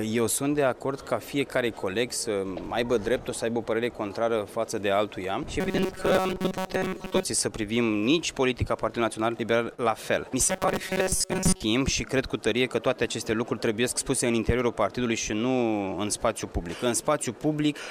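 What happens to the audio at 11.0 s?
From 10.46 to 11.63 s the audio turns into a rigid, metallic buzz at 188 Hz that only loosely follows the original. This robotic sound from repeated short buffers likely comes from a short chunk of about 5 ms being replayed while roughly 70 percent of the real audio is skipped.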